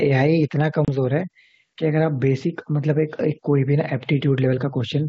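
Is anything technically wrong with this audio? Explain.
Yes. Gain pumping runs through the whole clip, swinging about 5 dB, likely because the input gain sits far too high and a fast limiter keeps clamping it, squashing the speech's dynamics.

Packet loss on an ADPCM call appears from 0.85 to 0.89 s: a hard-edged 30 ms hole, consistent with roughly three dropped packets. The receiving decoder's predictor and step size drift from the sender's, so speech resumes with brief distortion before settling. The wideband G.722 coding carrying the call adds no more than a faint hiss.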